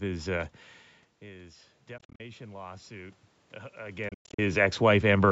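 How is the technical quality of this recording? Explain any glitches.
The recording has two kinds of fault: a slow gain rise and two patches of broken-up audio.

Automatic gain rising runs from 1.2 to 5.27 s. After the input fell by about 18 dB, the gain control lifted the level by about 8 dB. The sound and background swell together.

Bluetooth dropout, likely from lost packets, breaks the sound from 1.98 to 2.20 s and from 4.09 to 4.39 s. Short holes with abrupt edges chop the sound. The gaps total 133 ms over a 213 ms stretch in the first patch, with the longest at 40 ms. In the second patch they total 213 ms over 293 ms, with the longest at 107 ms. The sound resumes as if it had played on.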